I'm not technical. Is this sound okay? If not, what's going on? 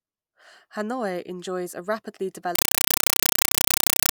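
No. From 2.55 s to the end, the speech turns into loud, chattering static: a compressed stream played as audio, likely Dolby Digital data misread as sound, pulsing about 31 times a second.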